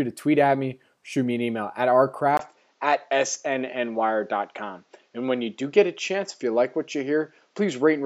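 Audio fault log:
2.37 to 8.05 s, input switched to a poorer device: the input likely changed mid-recording. After a 20 ms gap, nothing above 7.6 kHz remains, so speech dulls, level unchanged, faint new background noise.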